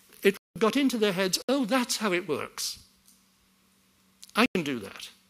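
Blocks of digital silence occur at 0.37 to 0.56 s (about 186 ms), 1.42 to 1.49 s (about 64 ms) and 4.46 to 4.55 s (about 93 ms). In each, the output was likely left unfilled and dropped to silence. The lengths of the first and last fit buffers of 8192 and 4096 samples. The sound cuts out abruptly and returns with no fade, and every block is heard as a short hole.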